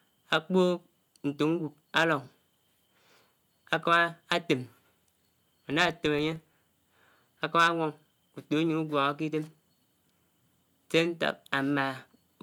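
From 5.46 to 6.82 s the speech carries a rough, regular ticking that runs together into a low buzz near 23.4 Hz, getting louder and softer with the level of the voice. This is a filter restarted on every block: the processing drops its stored state at each block boundary and starts again from silence, leaving a small transient every time. The repeat rate fits a 2048-sample block at 48 kHz.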